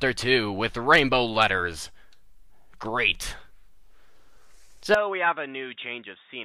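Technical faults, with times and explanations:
4.94 to 6.44 s, input likely switched to a poorer device: without any gap, the narrower device cuts everything above 3.8 kHz, and the level falls about 10 dB.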